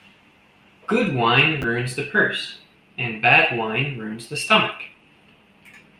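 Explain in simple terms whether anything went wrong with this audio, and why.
Something did go wrong, briefly, at about 1.62 to 1.64 seconds: chunks out of order. The system handles sound in small pieces, here 10 milliseconds each, and one piece arrived one step late, so it played after the piece that should have followed it. Nothing is missing, but the two pieces are swapped, leaving three abrupt joins. In the speech this comes across as a tiny jumbled blip, over in a fraction of a second.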